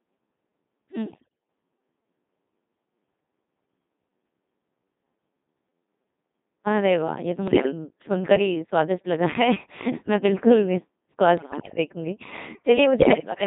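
Codec 2 vocoder, throughout: the speech is rebuilt from sine waves using only pitch, voicing, energy and envelope, confined to 150 Hz–3.7 kHz. Heavy robotic buzz fits roughly 2.4 kbit/s.

Bit errors on digital voice radio, at 1.08–1.30 s, 7.48–7.72 s, 11.38–11.78 s and 13.00–13.32 s: around one bit in ten flips, corrupting frame parameters, so pitch, level and tone jump into warbling bleeps.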